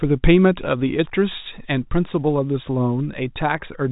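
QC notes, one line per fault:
No faults heard.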